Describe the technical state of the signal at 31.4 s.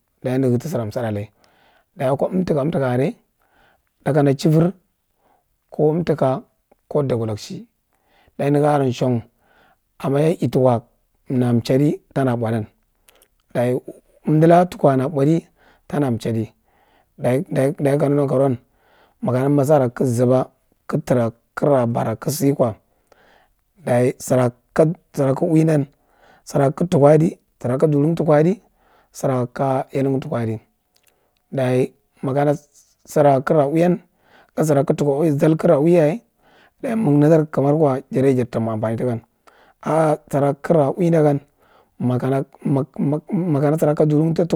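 At 31.4 s the speech signal is intact, with no audible technical fault at that moment.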